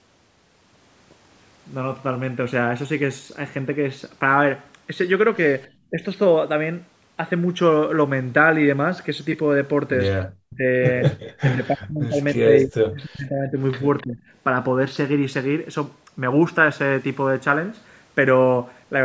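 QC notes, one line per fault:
5.9–6.03 s, 10.42–10.64 s, 11.4–13.59 s and 14.03–14.21 s: speech suppressed in double talk. The voice drops by about 15 to 40 dB. The deepest cuts are at 10.42 s and across 11.4–13.59 s, the longest stretch at about two seconds. The likely cause is an echo canceller mistaking overlapping talk for echo and turning the near talker down with it.
13.98–14.05 s: echo leak. A brief, faint copy of the voice returns 297 ms late, about 25 dB below the speech. This is likely loudspeaker echo slipping past the canceller and being sent back. It lands just before the next suppression dip.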